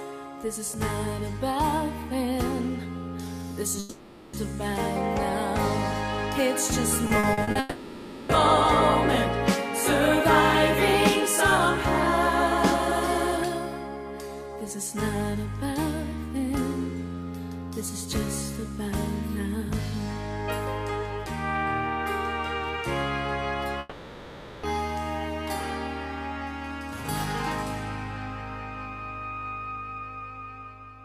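At 3.79 s the sound gives way to a long network dropout lasting until 4.35 s. The likely cause is that no packets arrived for over half a second. The receiver keeps extending the last sound as a fading buzz across the whole gap, with no stretch of true silence. The audio then resumes further on, and the missing 540 ms is never heard.

From 7.07 s to 7.57 s the sound breaks up with repeated packet loss (robotic sound). Five short holes, the longest 40 ms, are each patched by continuing the previous sound, and together they cover about a third of that half-second. The rapid patching gives a choppy texture with fragments missing.

Straight after, at 7.59 s, a second long network dropout runs to 8.31 s, with 700 ms concealed by the same smeared, decaying continuation. A third runs from 23.79 s to 24.65 s and replaces 840 ms with filled-in buzz before the audio returns past the lost section.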